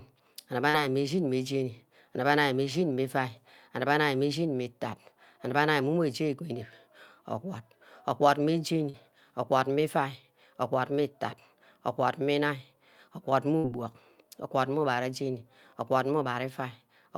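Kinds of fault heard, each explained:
Short concealed packet loss: at 0.69 s and again at 8.89 s, between "orgwad orgwad meh" and "orgwad meh", about 40 ms of speech failed to arrive at the decoder in time. Each time the receiver bridged the hole by extending the sound that came just before it and then crossfaded back into the real signal. The result is a brief smear or wobble in the speech, with those 40 ms of original material simply absent.
Burst of packet loss: at 13.58 s a longer stretch, about 60 ms, went missing or arrived too late to be played. The receiver kept the preceding sound going for about 62 ms, fading it as the gap ran on, so a short held tone or hiss replaces the real audio. Speech then picks up further along, and the 60 ms in between never returns.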